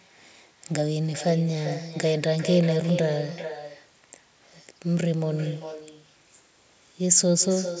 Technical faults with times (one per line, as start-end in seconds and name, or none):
0.00-7.80 echo with no canceller